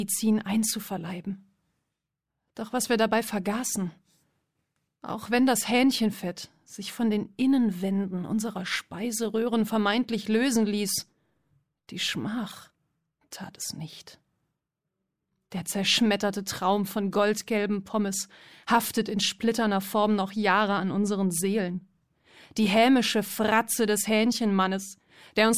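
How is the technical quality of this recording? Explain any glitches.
No glitches can be heard.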